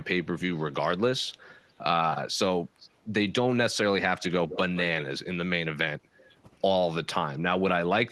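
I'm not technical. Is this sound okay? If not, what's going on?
No. There's an echo leak from 4.48 to 4.59 s: a brief, quieter copy of the speech comes back about 0.16 s late. This is likely a speakerphone on the other end whose echo cancelling missed part of its own playback and sent it back.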